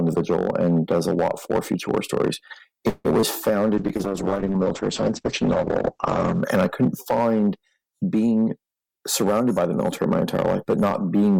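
Hard clipping runs through the whole clip. The signal is driven about 10 dB past what one stage can pass. A small share of peaks gets sliced flat. Those flat tops add high harmonics, heard as crackle and harsh edges on loud moments.

From 2.89 to 3.07 s there is a call audio freeze. The last sound is stretched into a fading buzz for about 153 ms, with roughly 30 ms near silence. Delayed packets likely emptied the jitter buffer. Nothing is lost, but everything after runs 153 ms later.

Short concealed packet loss follows at 3.21 to 3.24 s. About 20 ms of audio never arrived. The receiver filled 18 ms by extending the preceding sound and blending back. It is heard as a brief smear or wobble.

A call bitrate drop lasts from 3.79 to 6.49 s. The encoder falls from 96 kbps to 9 kbps and stays at the bottom for 2.64 s. Bandwidth shrinks from 20 kHz to 8 kHz. The sound turns muffled, coarse and watery.

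From 8.47 to 10.26 s comes a jitter buffer speed-up. Too much audio had built up. The receiver trims short pitch-period slices repeatedly, removing about 150 ms. Playback runs at 107% speed with pitch unchanged, so it sounds slightly rushed.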